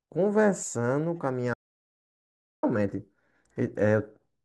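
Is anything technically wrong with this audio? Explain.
Yes. From 1.54 to 2.63 s the speech drops to silence with no room tone, an audio dropout to silence, likely from lost input while zeros kept being written.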